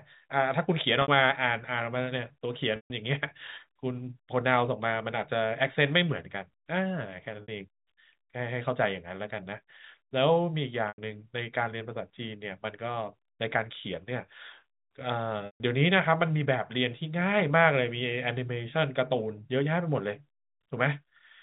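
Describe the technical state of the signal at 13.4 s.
At 13.4 s the speech is intact, carried as plain telephone-band audio by the G.711 telephone coding, with no fault at that moment.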